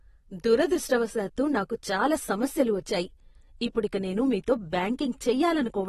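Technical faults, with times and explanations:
Throughout, AAC compression: the speech sounds dull and smeared, with a warbly, fizzy edge on sibilants and nothing above 12.5 kHz. That's likely a low-bitrate AAC-LC encode, around 32 kbps, which chops off the top band and leaves too few bits for the rest.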